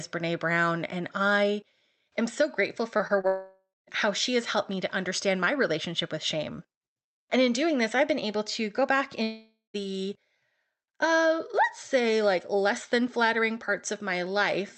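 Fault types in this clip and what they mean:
Short concealed packet loss: Three small gaps fall just after "I am so grateful", at 2.97 to 3.01 s, 3.07 to 3.11 s and 3.21 to 3.25 s. Each loses about 20 ms of the call. Those packets reached the decoder too late to use. The receiver patched each hole by stretching the sound just before it, then blended back into the real audio. Each patch is heard as a brief smear or wobble in the speech.
Long network dropout: Two long breaks occur, most likely because the connection stopped delivering audio. The first runs from 3.27 to 3.89 s, just before "how she has helped", and loses about 0.6 s. The second runs from 9.23 to 9.76 s, just after "able to go back", and loses about 0.52 s. Each time the last sound carries on as a fading buzz or hiss, then turns to silence for about 0.22 s and 0.17 s respectively. The speech then resumes with the lost part gone.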